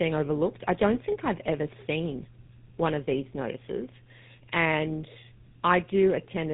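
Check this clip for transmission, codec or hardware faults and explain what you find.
One fault runs through the whole clip: tandem speech coding. The speech was passed through GSM full rate coding twice, with a 64 kbit/s G.711 mu-law link between them. Each GSM stage re-coded the previous stage's degraded output, so the errors stacked. The result sounds rough, muffled and warbly, with nothing above about 3.8 kHz.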